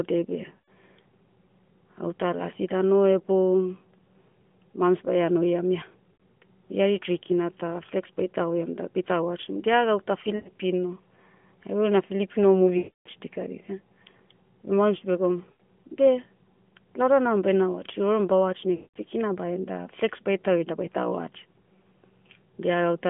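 Lost AMR speech frames break the sound at 0.56–0.69 s, 6.14–6.22 s (between "baia noiam ia" and "oi ari tri kina"), 10.36–10.49 s (after "watchim dia gauta"), 12.78–13.08 s, 15.52–15.61 s and 18.76–18.98 s (before "kina bahen da flex"). Corrupted frames were discarded, so the decoder kept repeating the last good pitch and vocal-tract shape at falling gain. Instead of a hard cut or click, the sound smears and fades. The 0.3 s gap at 12.78 s stretches furthest toward silence.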